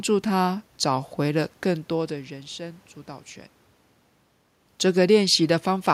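No system faults in the recording; the room noise is part of the recorded space, and the level shifts around 1.5 s and 4 s are the talker moving relative to the microphone.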